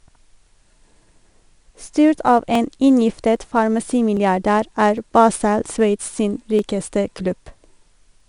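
A gritty, level-following hiss clings to every loud syllable of this speech, with nothing above 10.6 kHz, which fits 4-bit ADPCM compression at around 89 kbps. About ten regular clicks recur every 0.81 s from 0.13 to 8.20 s, likely clock drift buffer slips dropping or repeating a few dozen samples.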